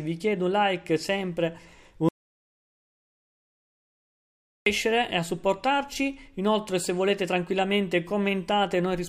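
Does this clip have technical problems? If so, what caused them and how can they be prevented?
Yes. An audio dropout to silence runs from 2.09 to 4.66 s, about 2.6 s of silence, likely from a lost input link or stray mute. Unlike a natural pause or gate, no room tone remains and the sound cuts abruptly both ways. Secure connections, monitor input levels while recording, and run a backup recorder.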